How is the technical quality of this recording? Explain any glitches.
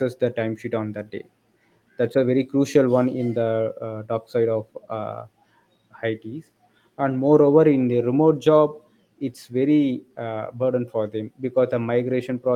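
No technical faults are audible anywhere in the recording, so there are no glitches to explain.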